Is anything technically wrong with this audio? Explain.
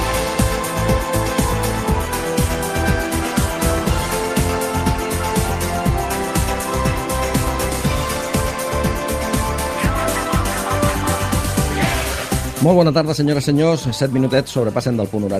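No, nothing here sounds technically wrong; it all comes through just as it should.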